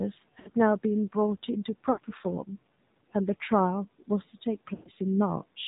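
Throughout, the speech carries AMR narrowband mobile codec damage: nothing above 4 kHz, with a buzzy, synthetic edge that fits a low AMR-NB mode near 7.4 kbps. The room noise, about 25 dB down, swirls rather than hissing. Lost AMR speech frames interrupt it at 0.40–0.49 s and 1.92–2.00 s, each about 60 ms, fitting three dropped 20 ms frames. At 4.74–4.89 s a longer gap of about 120 ms fits six frames. Unlike a hard dropout, the decoder smears the last sound and fades it out, and speech returns briefly weak.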